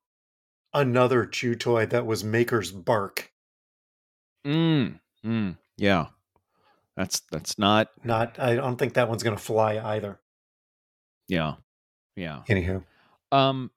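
No technical faults can be heard in this speech recording.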